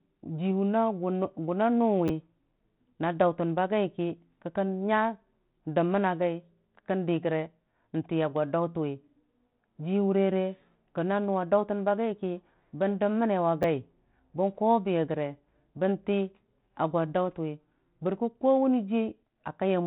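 Repeated buffer faults occur at 2.08 to 2.10 s and again at 13.63 s. New audio missed its deadline, so the device replayed the previous 10 ms buffer, twice at the first point and once at the second. With such a short buffer, each event sounds like a brief buzzy click with hard joins. Over the telephone-band sound, which has nothing above 3.9 kHz, roughly 20 ms of audio drops out at the first event and 10 ms at the second.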